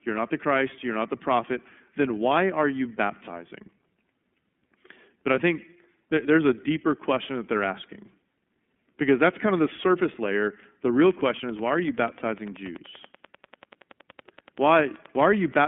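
Throughout, the speech has passed through the iLBC codec, which codes each frame on its own and keeps only a narrow telephone band. Nothing survives above about 3.5 kHz, and the plainly audible coding damage leaves the voice rough and synthetic, which fits iLBC's 30 ms frame mode.

From 11.01 s to 15.64 s, a train of clicks runs at a steady 10.4 per second, likely from interference or a failing interface injecting pulses. Around fifty similar ticks sound over the speech and its pauses, with peaks about as loud as the speech itself.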